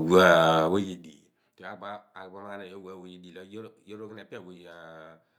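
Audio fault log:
0.60–1.20 s zipper noise: gain falls about 25 dB in unsmoothed steps of about 3 dB, roughly ten a second. Each step clicks, leaving a ticking rasp on the speech.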